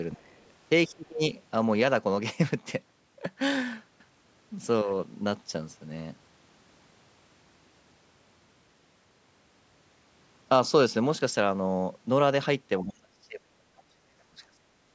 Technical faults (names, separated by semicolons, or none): speech suppressed in double talk